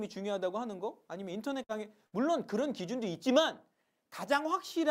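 At 1.63 to 1.71 s and again at 2.07 to 2.14 s, a burst of packet loss interrupts the audio. The receiver extends the last sound for roughly 50 ms and fades it, then resumes with about 60 ms skipped, leaving an audible jump.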